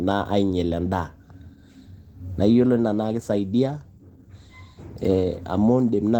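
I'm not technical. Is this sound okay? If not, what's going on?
No. The speech has been squeezed by Opus voice compression, set to a fairly low data rate, for the whole recording. To save space, the encoder rebuilds the voice from a rough model and paints the higher sounds in broad strokes, throwing away fine detail. You hear that as a coarse, slightly hoarse, faintly robotic quality that sits on every word from start to finish, even though the top end hasn't been cut off.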